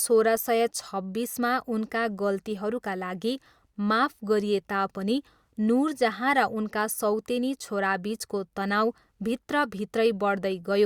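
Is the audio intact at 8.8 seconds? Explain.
Yes, the speech is intact at 8.8 seconds, with no dropout, click or other fault at that moment.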